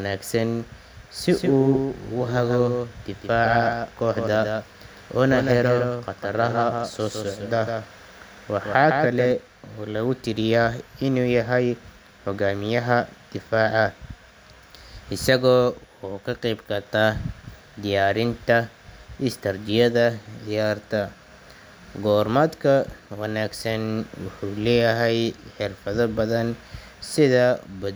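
From 1.29 to 9.31 s, the speech is heard twice, with a flat, full-band copy trailing about 150 ms behind at a few dB lower. It starts and stops abruptly: a doubled audio track, likely from a second, slower capture path.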